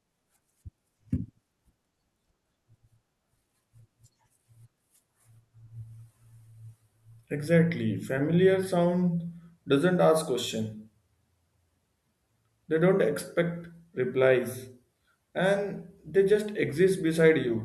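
No technical faults can be heard anywhere in the recording.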